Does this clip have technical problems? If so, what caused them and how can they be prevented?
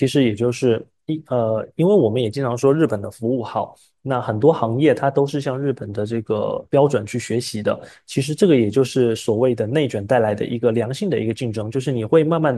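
No, this speech recording has no audible technical problems. Since nothing went wrong, there is nothing to trace back or prevent.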